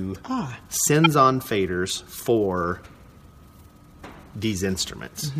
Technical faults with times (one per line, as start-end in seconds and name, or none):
1.04-1.06 corrupt frame decoded